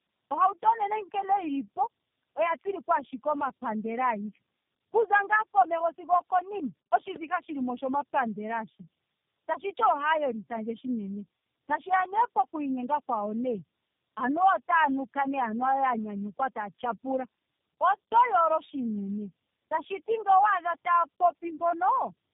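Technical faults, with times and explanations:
Throughout: tandem speech coding. The speech sounds rough, dull and warbly, with nothing above 3.5 kHz. The call passed through three low-rate speech codecs in a row, AMR-NB at 7.4 kbit/s, AMR-NB at 5.9 kbit/s and finally G.729A at 8 kbit/s, with G.711 links between them. At each border the speech was decoded and coded again, so every coder was modelling the previous one's errors. The damage piles up past what any single codec would leave.
7.16 to 7.18 s: loud pop. A single sharp crack, about 15 dB above the speech, lands just before "shilimo oshomapandela ashike", and the speech carries on beneath it. It lasts about 26 ms, a brief pulse that the circuits after it shaped. The likely cause is a sudden voltage step or spike, such as a plug, a switch, static discharge or a driver glitch, added into the signal path.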